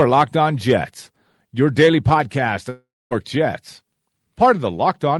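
A speech clip with one gap. Right after "your daily podcast", from 2.69 s to 3.13 s, the last sound trails off as a fading buzz into about 0.25 s of silence, then resumes with roughly 0.42 s missing, likely from a long network dropout.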